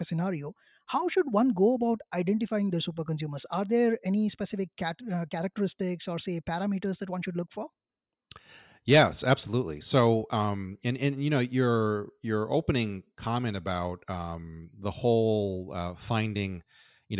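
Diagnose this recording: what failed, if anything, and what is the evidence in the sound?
Nothing in the speech signal points to a failure at any stage of the chain, with level, timing and continuity all holding steady throughout.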